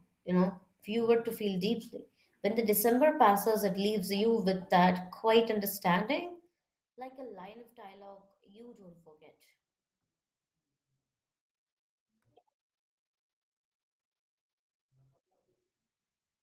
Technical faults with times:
none

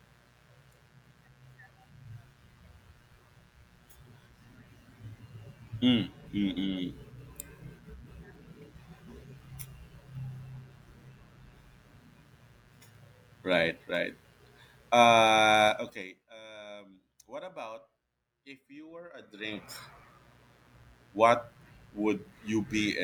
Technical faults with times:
0.00-23.04 mains buzz
15.65-16.27 zipper noise
19.16-19.70 zipper noise

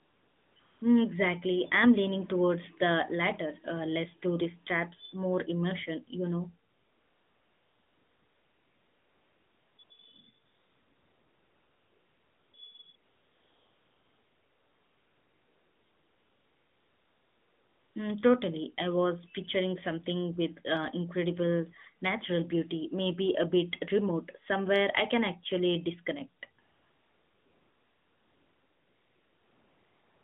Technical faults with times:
0.00-0.82 AMR comfort noise
6.70-9.90 AMR comfort noise
10.46-12.54 AMR comfort noise
12.96-17.96 AMR comfort noise
26.62-30.24 AMR comfort noise

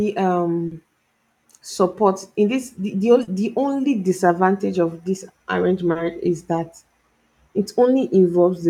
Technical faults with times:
0.67-0.74 short concealed packet loss
3.23-3.30 short concealed packet loss
5.91-5.98 short concealed packet loss

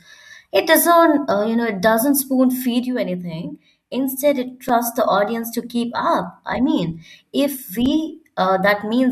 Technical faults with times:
4.69 block of digital silence
7.86 block of digital silence

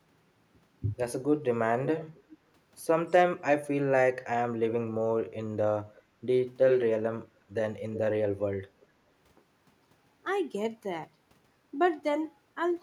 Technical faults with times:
1.85-2.38 echo leak
5.95-6.02 echo leak
6.67-6.84 echo leak
7.93-7.99 echo leak
8.80-8.86 echo leak

